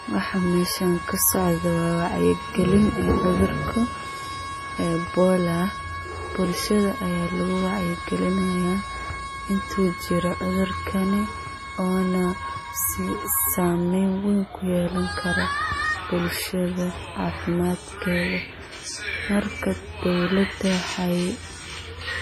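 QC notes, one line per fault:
Throughout, low-bitrate audio saved at a high bitrate: the speech keeps the coding artefacts of a heavily compressed earlier encoding, with nothing above 15.3 kHz. This points to a source near 24 kbit/s, likely re-encoded as high-rate MP3, which cannot restore those losses.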